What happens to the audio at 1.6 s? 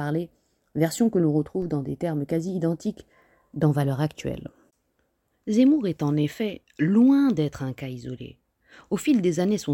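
At 1.62 s, between "version que l'on" and "dans des termes quasi", a DC step shifts the waveform's zero line by about −34 dBFS and then sinks back as a roughly 5 Hz high-pass drains it. It lands as a low thump or click while the speech runs on unchanged.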